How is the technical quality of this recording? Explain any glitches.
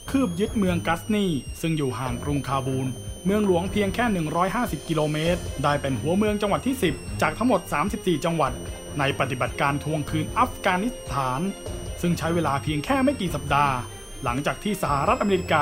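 The recording is compromised by one fault present throughout. A switching supply whistle comes from a power supply cycling at an audible rate, adding a high whistle around 3 kHz, wandering between 2.56 and 3.32 kHz, roughly 20 dB below the wanted signal.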